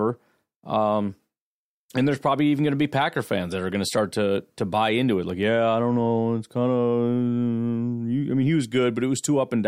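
In this speech clip, at 5.30 s, between "to buy into it" and "yeah I don't know", the sound briefly freezes flat and then resumes. This is an underrun with held sample: the output buffer emptied for about 1.3 ms, fitting a 64-sample shortfall, and the converter held its last value. A millisecond or two of audio was skipped, so the waveform jumps on return.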